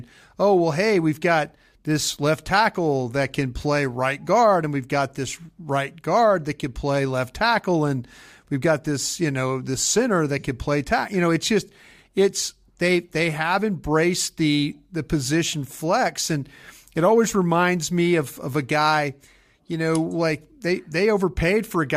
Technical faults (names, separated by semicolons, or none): none